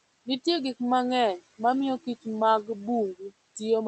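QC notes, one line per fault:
Throughout, noise suppressor artifacts: background noise is pulled down by about 19 dB between phrases and swells back under the speech.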